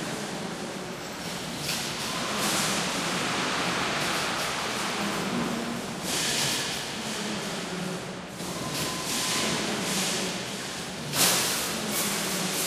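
No technical fault can be heard anywhere in the recording of these sounds, and the signal holds steady throughout.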